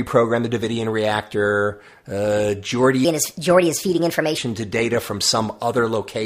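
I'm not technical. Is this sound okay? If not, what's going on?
No. There is a section at the wrong speed from 3.05 to 4.38 seconds: the speech suddenly runs 1.31 times too fast, so it sounds hurried and about five semitones higher. That's likely from the playback or editing being set to the wrong clock rate.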